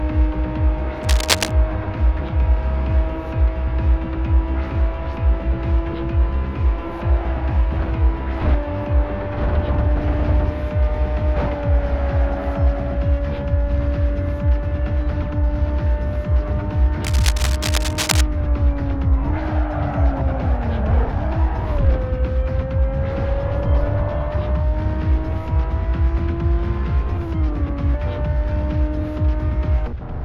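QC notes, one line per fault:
1.03 to 1.52 s, cable scratch noise: a short patch of dense, uneven crackle sits only a little below the level of the sound, heard as scratching over it for about half a second.
17.04 to 18.21 s, cable scratch noise: the same rough rustle returns for about 1.2 s. Both bursts likely come from a worn cable, connector or control being moved, its contact resistance jumping rapidly and injecting irregular noise.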